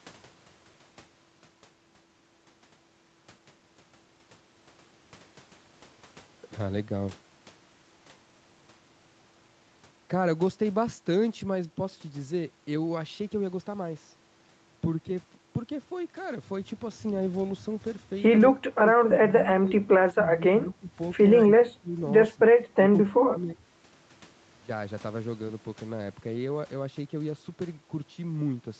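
Speech suppressed in double talk affects this speech clip at 18.52–20.92 s, 21.44–21.96 s, 22.35–22.40 s, 22.71–22.80 s and 23.05–23.58 s, where the voice ducks and breaks into pieces, dropping by up to about 30 dB. The likely cause is an echo canceller facing simultaneous talk from both ends: unable to tell this talker from loudspeaker echo, it attenuated everything, including the wanted speech, in short bursts.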